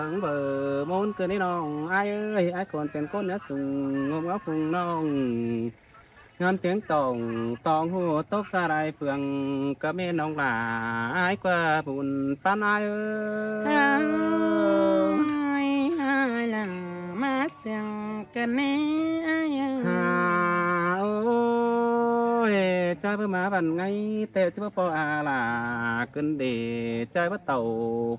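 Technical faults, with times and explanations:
No technical faults can be heard anywhere in this audio. Nothing in it needs a time stamp or an explanation.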